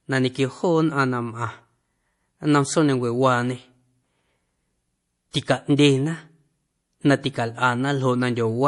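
Throughout the speech, the encoder appears to have run short of bits and, to cope, discarded everything above 11.4 kHz while dropping weak frequency lines that switch on and off between frames. The result is a dull top end and a watery, swirling texture around sibilants, with plainly audible smearing on consonant onsets. The cause is likely heavy MP3 compression, and the degree of damage fits a bitrate of around 48 kbps.

From 5.31 to 5.34 s, a sharp onset landed late in a transform block, so the quantisation noise sized for that loud moment was spread back across the quiet stretch just before it. This pre-echo appears as a hiss lasting about 33 ms that runs ahead of the attack, which itself arrives softened and blurred rather than crisp.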